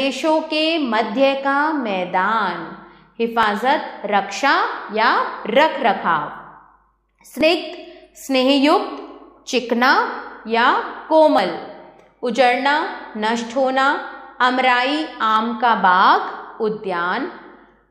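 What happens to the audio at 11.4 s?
At 11.38 s the audio skips: a very short slice, around 20 ms, drops out and the material on either side is butted together with no gap, so the flow jumps forward abruptly. This is audio missing between chunks. The likely cause is a recorder or processor handling the signal in 4.0 s blocks and losing a small piece while closing one block and starting the next, which would place the join at this point.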